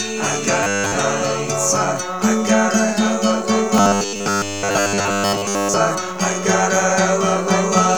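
From 0.63 to 0.96 s and again from 3.78 to 5.76 s, the sound becomes a metallic buzz at 100 Hz. This is robotic sound from repeated short buffers. Audio likely arrived too seldom. A 10 ms stretch kept repeating, and most real audio was skipped.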